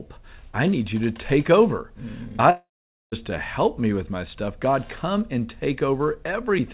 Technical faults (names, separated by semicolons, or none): long network dropout